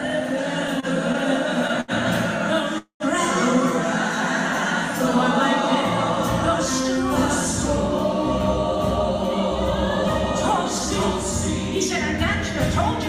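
At 0.80 to 0.85 s and again at 1.81 to 1.91 s there is a short stall from a late packet. Each time, a packet missed its slot, the jitter buffer drained, and the receiver stretched the last sound until the data turned up, about 23 ms the first time and 75 ms the second. Nothing is lost; the sound simply hangs a moment with a faint buzz. On a spectrogram the harmonics run flat and unchanging across those spans, and the waveform shows a repeating, slightly sagging cycle.

From 2.78 to 3.03 s the audio freezes, the pattern of a call audio freeze. The last sound is carried forward as a fading buzz for roughly 219 ms in total, and about 110 ms of that decays into silence before playback resumes exactly where it stopped. The likely cause is packets held up in transit long enough to empty the jitter buffer. On a spectrogram this appears as a smeared, fading band ending in a blank gap. On the waveform, the envelope tapers to flat, then the signal resumes abruptly.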